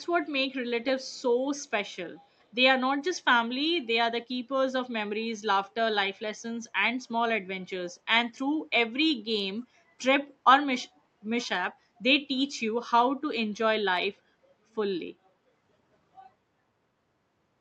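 Echo leak at 0.00–0.06, 1.56–1.66 and 9.60–9.64 s: very faint, brief scraps of the speech return about 276 ms late, likely because a loudspeaker-side echo canceller let residual pickup through and sent it back.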